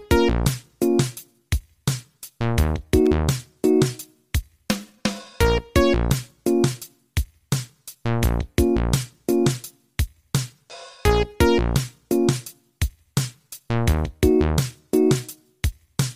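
At about 3.06 s, a worn or dirty contact in the signal path briefly lost and regained connection, producing a loose connector crackle. For a fraction of a second the line was interrupted and restored in quick succession, chopping the signal into fragments, and any DC sitting on the line would turn each break into a small pop. The result is a short, irregular burst of crackling or scratching laid over the sound at that moment.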